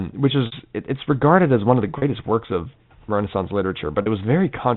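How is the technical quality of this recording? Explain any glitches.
The recording is speech carried over G.711 A-law telephone coding, so it is band-limited to below 4 kHz. It has three brief dropouts caused by packet loss with pitch repetition.

At 0.46 to 0.52 s (60 ms), 1.98 to 2.02 s (40 ms) and 4.02 to 4.06 s (40 ms), audio went missing in transit. The gap lengths fit three and two lost 20 ms packets. The receiver filled each gap by repeating the last pitch period it had received, fading it down as it went, so the two 40 ms spots sound like a momentarily held, slightly buzzy tone, while the 60 ms one fades into silence before the speech picks up again.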